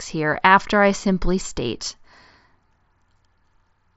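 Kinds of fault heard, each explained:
No faults can be heard in this speech recording. It arrives through a Bluetooth mSBC headset codec working as intended, with nothing above about 7.7 kHz and only a light coding texture on the louder sounds.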